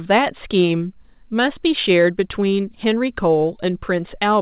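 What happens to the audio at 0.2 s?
At 0.2 s the audio is intact, with no fault, just the narrowband sound of the call path, which carries nothing above 4 kHz.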